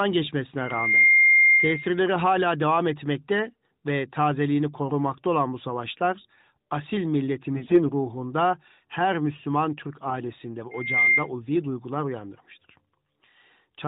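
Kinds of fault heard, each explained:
AMR bit errors: On a weak radio link the lightly protected bits of the mobile speech frames arrived corrupted while the frame check still passed. From 7.56 to 7.84 s, after "olan bu savaşlar asil", about ten frames decode with misplaced excitation pulses and skewed gain and spectral values, so the speech turns hoarse and gargly.
loudspeaker feedback squeal: A microphone picked up its own loudspeaker, and at 2.1 kHz the loop gain rose above one. That tone builds up over roughly a third of a second from 10.71 s and howls about 10 dB above the speech until 11.29 s, just before "ulvi duygular uyandırmıştır".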